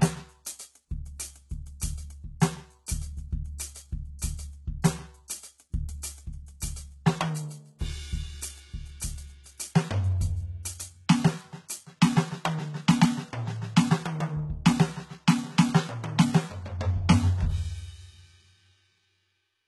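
A music clip. Its treble sounds gritty and metallic throughout, with nothing above 11.8 kHz. The likely cause is heavy HE-AAC compression, and the damage fits a bitrate near 16 kbps. Pre-echo softens two attacks. A brief hiss comes just before the hit at 1.80 s and runs from 4.19 to 4.22 s, because codec noise spills ahead of each sharp onset.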